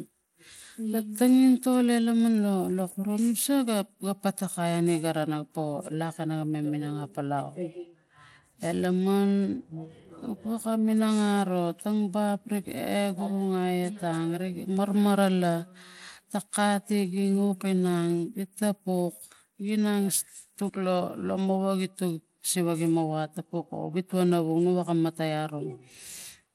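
From start to finish the speech sounds gritty and thinned at the top: the treble flickers in and out instead of holding steady, and a rough, grainy noise with metallic aliasing clings to the speech. This is likely Bluetooth SBC compression at a small bit pool, with a damage level that fits roughly 96 kbps. The weak upper sub-bands are starved of bits and drop out intermittently, while the remaining bands are coarsely quantised, producing the grit.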